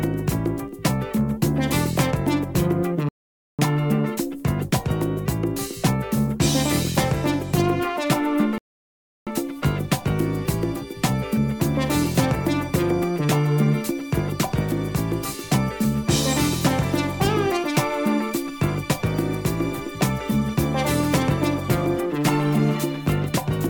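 The player ran out of buffered data twice, causing a rebuffering stall: the audio drops to silence at 3.09 s for 0.50 s and at 8.58 s for 0.69 s, then resumes seamlessly.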